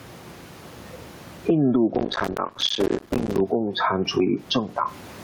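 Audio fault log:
Throughout: gain pumping. The room noise sits about 38 dB below the speech, and the gain swings by roughly 20 dB. Peaks and quiet passages sit unnaturally close in level, so the speech sounds flattened. This is likely a fast limiter or compressor clamping down on input that is set far too hot for the microphone, then releasing between phrases.
1.95–3.40 s: processor overload crackle. For about a second and a half a dense, gritty tearing rides on the speech and then stops abruptly. It is made of well over a hundred tiny dropouts in quick succession, each a short hole of silence with hard edges. The spacing fits a buffer of around 5 ms. The processor could not deliver buffer after buffer on time, and each missed deadline left a brief silent gap.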